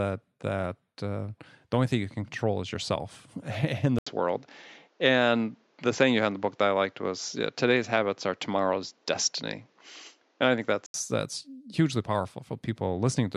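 At 3.99 s, just before "that's hugely", an 80 ms gap, then the speech goes dull, cut off above 7.6 kHz with faint new background noise: likely an input switched to a poorer device, until 10.94 s.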